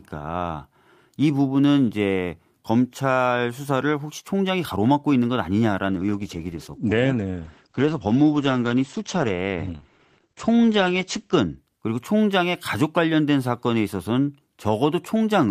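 From 5.9 to 11.63 s there's a call bitrate drop: the speech goes rough and muffled, top end cut above 8 kHz, which fits roughly 12 kbps.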